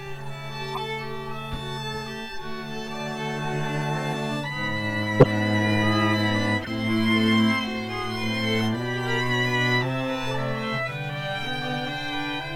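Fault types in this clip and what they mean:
Corrupt frame decoded: Damaged compressed frames were decoded anyway, putting energy at wrong frequencies. Three short blips sound, near 0.68, 5.2 and 6.62 s. Each lasts under a tenth of a second. The 5.2 s one is loudest, at about -5 dBFS.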